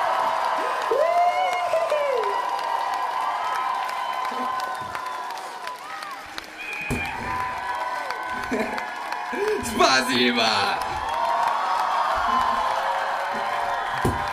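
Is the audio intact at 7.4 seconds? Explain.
Yes, the audio is intact at 7.4 seconds, with no dropout, click, distortion or other fault at that moment.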